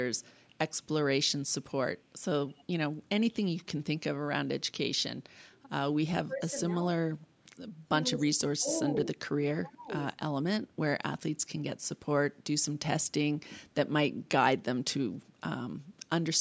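At 2.49 to 2.64 s there is an echo leak: the far end is likely playing the call over a loudspeaker, and its echo canceller let a scrap of the picked-up signal return. The result is a faint copy of the speech trailing about 166 ms behind the original, sitting roughly 30 dB below it. It is brief.

From 6.26 s onward comes speech suppressed in double talk, most likely an echo canceller that could not tell the local talker from the loudspeaker echo while both sides spoke, and so turned everything down. The speech sinks by as much as about 30 dB from 6.26 to 7.3 s, then dips again at 7.88 to 7.92, 8.09 to 8.4, 8.59 to 8.74, 9.02 to 9.32 and 9.59 to 9.91 s, by 20 to 30 dB each time. The voice sounds chopped, fading out in pieces.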